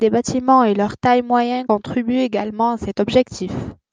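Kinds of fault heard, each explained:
Damaged data in a compressed stream: a short stretch of the encoded speech arrives corrupted, so the decoder cannot read those frames, drops out of sync and hunts for the next valid frame header before playing on. Between 1.65 and 1.69 s, right after "bâtiments et leur taille" and before "également à", this comes through as a brief glitch about 40 ms long.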